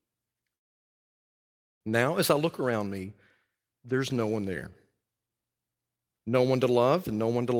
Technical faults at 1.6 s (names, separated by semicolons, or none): call audio freeze